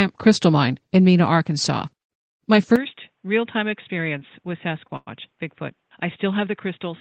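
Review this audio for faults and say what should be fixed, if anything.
At 2.76 s the sound goes dull and boxy and stays that way to the end. Nothing above 3.8 kHz survives, the level drops by around 10 dB, and a faint new noise floor sits well below the signal. There's no gap at the change, which points to an input switched to a poorer device, likely a headset dropping into its narrow call profile. Worth locking the input device for the whole session so the system can't hop to another one mid-take.

From 4.87 to 4.90 s there's a short stall from a late packet: the sound hangs on itself for about 16 ms, then picks up where it left off. Nothing's lost, but everything after it runs 16 ms late. A slightly deeper jitter buffer would absorb a hiccup that small.

Right after, from 4.96 to 5.09 s, there's a call audio freeze. The last sound is drawn out and fades, then about 20 ms of silence, roughly 103 ms of filler in all, before it carries on with nothing missing. 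That pattern most likely comes from packets held up on the network. A steadier connection or an adaptive jitter buffer with more headroom should stop it.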